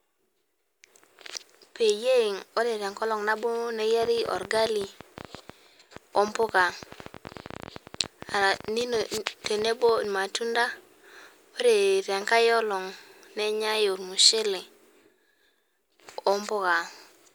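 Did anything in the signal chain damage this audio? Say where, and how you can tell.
Yes. Right after "peyie ore tenkolong nabo", a train of clicks runs from 4.03 to 10.05 s. That's around seventy same-shaped ticks at roughly 12.8 per second, unevenly spaced, peaking a few dB over the speech and audible in pauses. Likely interference getting into the analogue wiring.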